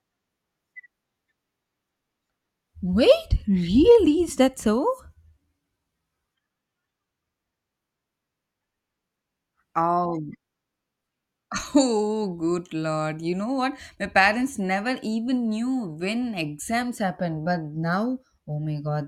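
Nothing is technically wrong with this speech recording.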